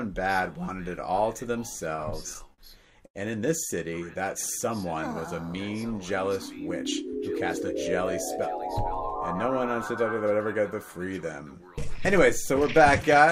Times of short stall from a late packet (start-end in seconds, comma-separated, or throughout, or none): 3.06-3.17